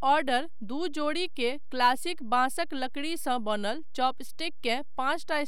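Right from the start and running the whole way through, this speech has a DC offset of about -32 dBFS: the waveform sits slightly shifted off zero. You won't hear it as such, but it quietly eats headroom and shows up as a constant lump at 0 Hz.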